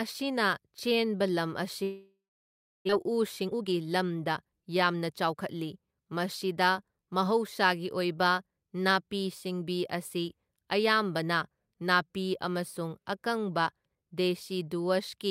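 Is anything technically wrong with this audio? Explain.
Yes, there are two faults in this speech clip.

From 1.83 to 2.91 s there is a long network dropout, likely caused by packets failing to arrive for over a second. The receiver stretches the last sound into a fading buzz, then leaves about 650 ms of silence, and about 600 ms of speech never returns. Unlike brief packet-loss concealment, which only smooths short gaps, this is an audible hole where material is simply skipped.

From 2.92 to 5.63 s a jitter buffer speed-up follows. The late audio piled up in the buffer, so the receiver trimmed short pitch-period slices again and again, removing roughly 400 ms to catch up. Speech runs at about 115% speed and sounds hurried, but the pitch stays the same. That distinguishes it from a sample-rate or playback-speed error, which would raise the pitch along with the tempo.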